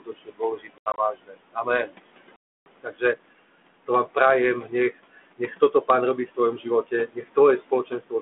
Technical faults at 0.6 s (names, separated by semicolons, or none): noise suppressor artifacts; speech cut by the noise suppressor